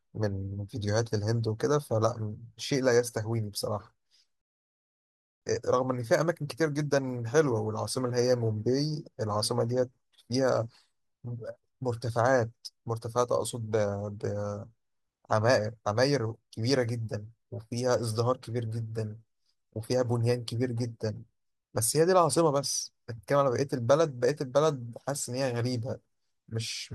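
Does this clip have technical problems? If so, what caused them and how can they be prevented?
Yes. There is a rebuffering stall at 4.41 s. The speech drops to silence and stays silent until 5.42 s. Then it picks up exactly where it stopped. No speech is skipped. The pause adds about one second to the playback. This happens when the player empties its store of downloaded audio and has to wait for more data. To prevent it, buffer more audio before playback starts, or stream at a bitrate the connection can sustain.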